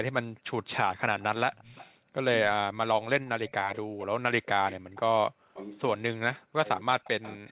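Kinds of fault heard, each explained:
Background gated by the echo canceller: while the far side played, the room tone dipped briefly, about 40 dB at 0.33 s and about 21 dB at 2.0 s, showing as narrow gaps in the noise floor.
Echo leak: a faint copy of the far-end talker returns about 270 ms late, likely from incomplete echo cancellation, appearing as weak repeated spectral patterns between 1.2 and 7.51 s.
Speech suppressed in double talk: from 2.43 s to the end the talker's voice dips and breaks up, likely because the canceller muted overlapping speech, leaving notched, chopped waveform envelopes.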